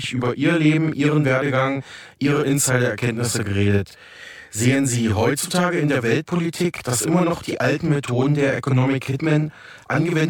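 One channel runs about 40 ms behind the other for the whole clip, and when the pair is folded to mono the late copy lands at equal level. The result is channel delay doubling: every syllable of the speech gains a close, distinct slap echo.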